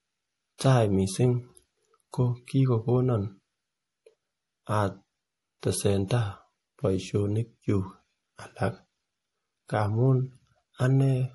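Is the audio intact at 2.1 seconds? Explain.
No. From 2.11 to 2.13 s there is pre-echo: a brief hiss, about 20 ms long, comes just ahead of a sharp onset in the speech, and the attack itself sounds softened. A transform codec spreads its quantisation error across the whole block, so when a sudden loud event lands late in a block, noise scaled for that event also fills the quieter moment before it. That is the smear heard here.

The same moment also shows the damage heard across the whole clip, most likely from MP3 compression at a low bitrate; the degree of damage fits something around 48 kbps. Nothing is present above 11.5 kHz, which points to the encoder cutting the treble at a fixed point to save bits. The codec damage is plainly audible, with a dull top end and a watery, unstable texture where weaker frequency components drop in and out between frames.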